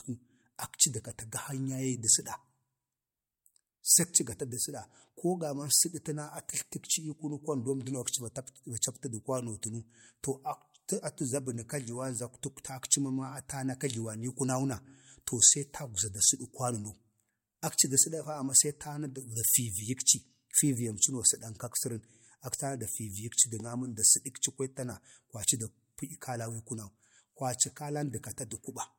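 No technical faults are audible anywhere in it.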